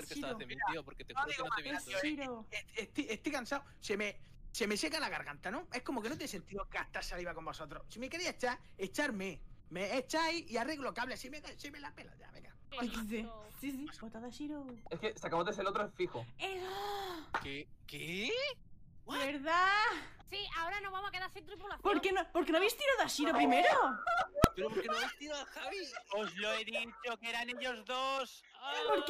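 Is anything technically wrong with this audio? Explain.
Yes, there's one fault. At 24.44 s you get invalid numbers at full scale: a calculation blew up into infinite or invalid values that got pinned to the maximum level for about 1.45 ms, which fits a 64-sample block. The block is so short that it lands as a single loud bang.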